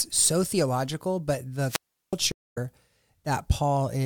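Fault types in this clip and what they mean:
wireless microphone squelch dropout: The analogue FM radio link weakened until the receiver's squelch cut its output. From 1.66 s hiss swells, then about 0.37 s of near silence follows before speech returns by 2.17 s. The spectrogram shows broadband noise, then a blank gap. The waveform collapses to a flat line.
stream reconnect: The connection broke, and the player restarted its decoder mid-stream. At 2.32 s the audio stops for 208 ms, then resumes roughly 150 ms further along, so a little speech is skipped. The waveform shows a flat gap ending in a short fade-in, and the spectrogram shows a clean vertical blank band.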